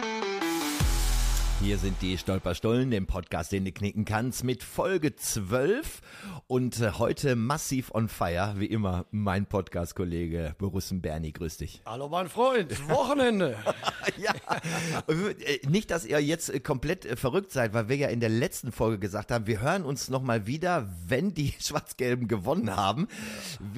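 No technical fault can be heard anywhere in the audio, and the signal holds steady and intact throughout.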